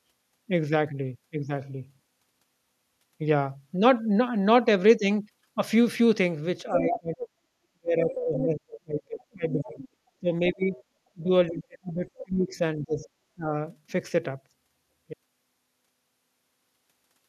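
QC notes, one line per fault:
6.63–7.35 s, 7.72–9.84 s, 10.2–10.77 s, 11.12–13.52 s: speech suppressed in double talk. The speech dips by around 20 to 35 dB, deepest in the first two spans, and thins or breaks up while another voice is present. This is likely an echo canceller ducking both talkers because it cannot separate them.
6.73–6.99 s, 8.1–8.45 s, 9.78–9.88 s, 12.18–12.24 s: other side's voice leaking through. A second voice comes through in short scraps, the first two only about 5 dB under the main speech and the later two much fainter. This is likely loudspeaker echo left behind by incomplete echo cancellation.
15.1 s to end: audio dropout to silence. The speech cuts off mid-flow and the remaining two seconds are digital silence with no room tone. This likely comes from a lost input or a broken link, with the recorder continuing to write silence.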